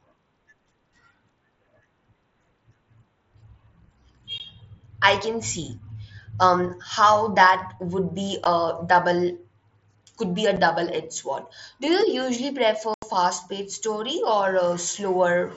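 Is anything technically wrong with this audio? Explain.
Yes. Unconcealed Bluetooth headset packet loss at 4.38 s, 8.44 s after "that would be", 10.56 s after "could be a", and 12.94–13.03 s. Speech packets between headset and phone went missing and silence took their place, leaving abrupt 15, 15, 7.5 and 82.5 ms holes. The last is an audible dropout, all within the mSBC link's slightly grainy band up to 8 kHz.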